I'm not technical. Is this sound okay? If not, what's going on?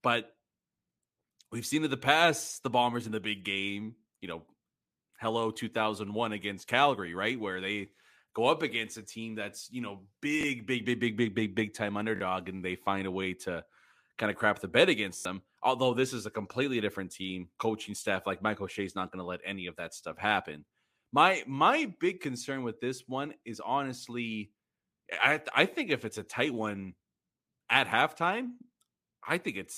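No. There are repeated buffers: the device replayed the last tiny chunk of audio, about 21 ms long, instead of new sound. These cause short stutters at 10.41 s after "team that's you know", 12.16 s after "big big big time", and 15.17 s after "of crap the bed".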